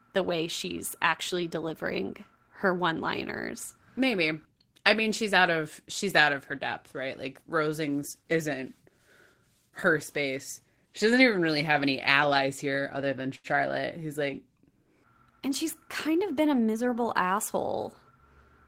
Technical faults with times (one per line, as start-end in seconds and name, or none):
13.35-13.47 short stall from a late packet
16.08-16.89 jitter buffer speed-up